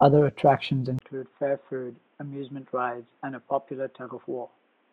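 At 0.99 s there's a brief 20 ms dropout, then the speech turns dull and boxy, noticeably quieter, with faint new background noise, and nothing above 3.8 kHz through to the end. That's likely an input switched to a poorer device.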